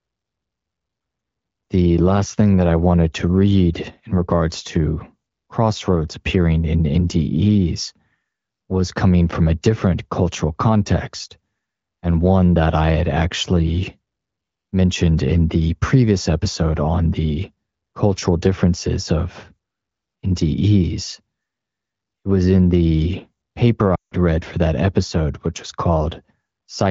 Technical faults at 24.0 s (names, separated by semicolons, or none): lost AMR speech frames